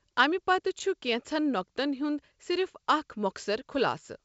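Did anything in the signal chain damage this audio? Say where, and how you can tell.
No, the signal chain left this speech recording undamaged, and its wideband telephone path sounds consistent with G.722 coding at the full 64 kbit/s rate, with audio reaching up to about 7 kHz and at most a faint upper-band hiss.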